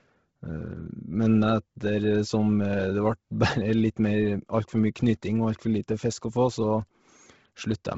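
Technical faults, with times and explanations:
throughout Bluetooth LC3 compression: the speech was most likely passed through the LC3 codec at a starved bitrate, consistent with about 16 kbps in 10 ms frames. Much of the upper spectrum is discarded and refilled with noise, leaving heavy grainy, breathy damage and nothing above 7.7 kHz.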